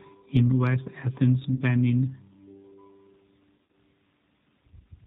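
G.729 codec damage runs throughout the speech. The 8 kbit/s G.729A coder rebuilds each 10 ms frame from a vocal tract filter, pitch predictor and a few pulses, so nothing above 4 kHz survives and the voice sounds plainly rough and synthetic.

VoIP packet loss concealed by the speech codec appears first from 1.55 to 1.63 s, where about 40 ms of audio went missing, which fits two lost packets. The decoder stretched its last pitch and filter across the gap with fading gain. From 3.57 to 3.75 s, 100 ms is lost, scattered over 160 ms with a longest run of 60 ms. That suggests five missing packets, giving repeated concealment and weakened sound as the decoder recovers frame by frame.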